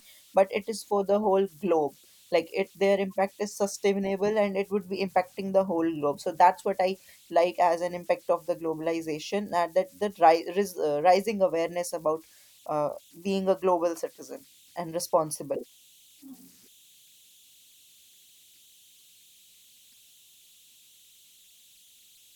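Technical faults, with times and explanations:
Throughout: converter idle tones. A tone near 3 kHz sits in the pauses of this speech, and grainy noise lies under quiet passages, about 33 dB below the signal. An undithered delta-sigma converter falls into repeating bit patterns at low input, and those patterns form tones.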